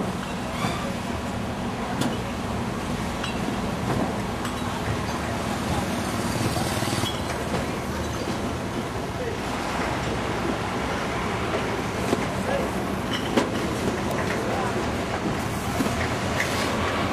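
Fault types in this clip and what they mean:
Damaged data in a compressed stream: corrupted bytes in the encoded audio make the decoder misread frames and lose sync until it finds the next valid frame header. Here this causes two brief 54 ms blips, at 7.02–7.07 s and 9.15–9.21 s.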